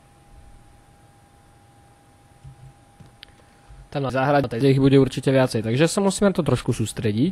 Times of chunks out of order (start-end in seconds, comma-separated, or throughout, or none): 0.85-1.54, 4.10-4.61